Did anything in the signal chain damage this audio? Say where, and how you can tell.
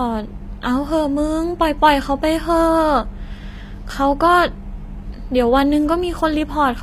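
Yes, at the codec stage, throughout the speech. The audio stops dead at about 15.4 kHz, and the treble below that ceiling has a synthetic, metallic quality, with plainly audible coding damage. That pattern likely points to HE-AAC compression, and the damage level fits a low bitrate around 24 kbps. The encoder codes only the lower spectrum and rebuilds the treble by copying lower bands upward under a coarse envelope, so the upper harmonics do not line up with the real ones.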